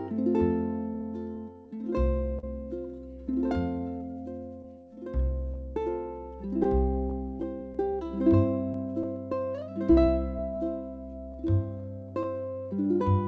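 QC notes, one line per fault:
Throughout: clock drift between sender and receiver. The sending clock runs roughly 3% slow against the receiver's, so the jitter buffer keeps draining and the receiver must repeatedly insert material to keep playing. The result is a faint unevenness in pacing across the whole clip, not one audible event. Unlike a single late packet, the cause never goes away, which is why the corrections below keep recurring.
0.94–12.89 s: repeated timing corrections. To compensate for the slow sender, the receiver plays at about 98% speed, stretching short pieces all in the same direction at uneven spacing, and adds roughly a fifth of a second over the span. Each edit is tiny, so it comes across as a slightly dragging, unsteady tempo or an occasional soft hiccup. The G.722 call path leaves nothing above 8 kHz.
2.39–2.44 s: short stall from a late packet. One packet missed its slot, the buffer briefly ran dry, and the receiver held the last sound for 41 ms until it arrived, then resumed from the same point. 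Nothing is lost, but that moment sounds held a touch too long, with a slight buzz or dip. Unlike the gradual drift corrections, this is a single isolated hold that adds 41 ms of delay in one step.
6.64–9.05 s: scattered short gaps. Around seven packets arrived late or went missing at separate points, and each hole was patched by extending the preceding sound. None exceeds about 15 ms, and together they conceal only a small fraction of the span, so nothing is actually missing. They are heard as brief ticks or smears. Unlike the single stall, they are spread out and individually shorter, and unlike the drift corrections they are confined to this stretch.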